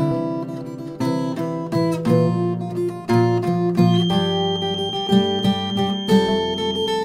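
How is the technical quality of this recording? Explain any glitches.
A feedback whistle runs from 3.81 s to the end at 7.04 s: a single tone near 3.2 kHz sits roughly 10 dB below the sound, swelling and fading slowly. It is likely a loudspeaker-to-microphone loop held just short of full feedback, sustaining that one frequency without growing into a howl.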